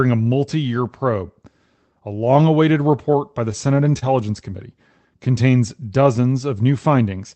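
From 2.91 to 4.04 s, just after "long awaited", brief ticks and small smears appear: scattered short gaps, roughly seven lost packets, each patched by extending the preceding sound. From 4.50 to 5.29 s the sound drags slightly at unchanged pitch. This is a jitter buffer slow-down, with repeated pitch periods adding 45 ms and playback running at 95% speed.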